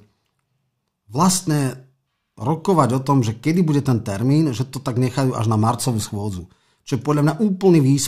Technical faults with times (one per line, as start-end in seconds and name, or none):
none